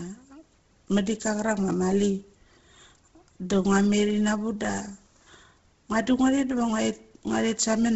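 Throughout, the speech has a breathy, grainy edge and nothing above 7.7 kHz, likely from heavy Bluetooth LC3 compression in 10 ms frames, consistent with a rate near 16 kbps.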